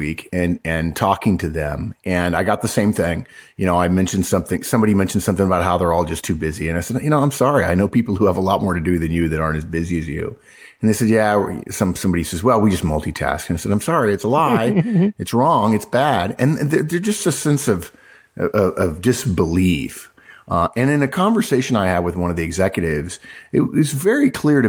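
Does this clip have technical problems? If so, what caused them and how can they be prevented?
No, there are no technical problems to hear in this speech recording. Nothing here calls for a cause to be traced or a fix to be applied.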